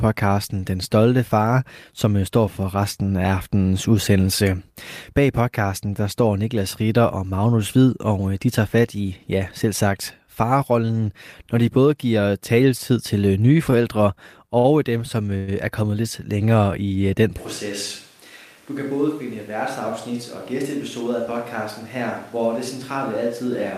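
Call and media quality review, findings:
Short stall from a late packet, 13.71–13.75 s, just after "giver taletid til nye": jitter buffer ran empty, last sound stretched about 15 ms, no content lost. Spectrogram shows a smeared, flattened stretch where the harmonics stop moving; the waveform shows repeated cycles.

Short stall from a late packet, 14.59–14.67 s: same jitter buffer underrun with a 57 ms fill and nothing missing. Playout is held, then resumes at the same point. Visible as a frozen spectral slice and a regular, looped-looking waveform.

Call audio freeze, 15.37–15.50 s, just before "er kommet lidt". Likely cause: packets held up in transit and jitter buffer emptied. About 103 ms of concealment, fading buzz or hiss, no silent gap. Spectrogram shows a smeared, decaying band.

Switch to a distant microphone from 17.38 s to the end, right after "i den". Likely cause: close mic dropped in favour of a farther one. 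Sound turns roomy, hollow and thinner, level down about 10 dB, room noise about 25 dB below speech. Spectrogram shows a noisier floor and weaker lows.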